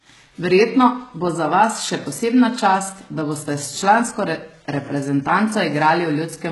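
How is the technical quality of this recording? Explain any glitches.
The recording is heavily degraded throughout by compression. The treble sounds false, with s sounds coming out gritty, metallic and lispy, and nothing at all above 11.5 kHz. These symptoms point to HE-AAC compression, likely at a very low rate that fits roughly 12 kbps. The codec keeps only the lower spectrum and synthesises the top by copying lower bands upward, so the rebuilt harmonics don't line up with the real ones.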